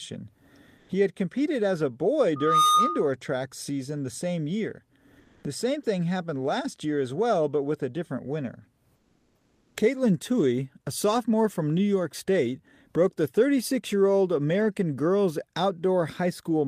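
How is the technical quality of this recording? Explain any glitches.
The recording has two kinds of glitch: a feedback squeal early on and three short spots where the background turns flat and synthetic.

The loudspeaker feedback squeal runs from 2.36 to 3.11 s, just after "competed as a boy" and ending before "track season." A single 1.2 kHz tone swells over roughly a third of a second until it sits about 5 dB above the speech. A microphone was picking up the loudspeaker it fed, and at 1.2 kHz the loop's gain exceeded one, so that frequency built on itself.

Comfort noise in place of the background occurs at 0.79 to 0.87 s (80 ms), at 5.19 to 5.43 s (240 ms, after "same year") and at 8.95 to 9.75 s (800 ms, after "with a different winner"). In each gap the quiet background, about 36 to 42 dB below the loud passages, becomes a steady, featureless hiss. It is about 1 dB louder in the first gap, and about 2 dB and 4 dB quieter in the later two. 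The likely cause is Opus discontinuous transmission: the sender stops sending audio when it detects no speech, and the receiver fills the pause with shaped synthetic noise.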